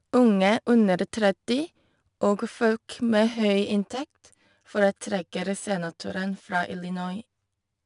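From the start, 4-bit ADPCM compression adds gritty hiss that rises with each loud syllable, unlike steady background noise. Nothing reaches above 10.6 kHz, which fits a low-rate stream near 89 kbps. From 3.34 s to the end, channel delay (comb filtering) makes the speech hollow. One channel lags by about 10 ms, carving fixed notches from around 50 Hz upward that, unlike flanging, never sweep.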